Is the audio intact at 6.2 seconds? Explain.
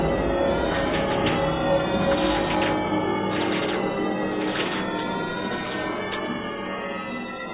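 Yes, at 6.2 seconds the audio is intact, with no dropout, click, distortion or other fault audible at that moment.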